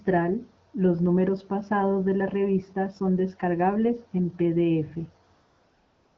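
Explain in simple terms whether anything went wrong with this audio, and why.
After "son descargables en pdf", from 5.33 s to the end at 6.17 s, the real background gives way to AMR comfort noise. The phone judged the talker silent and stopped sending speech, so the receiver played smooth, steady artificial hiss. Unlike a dropout, that gap isn't dead silent.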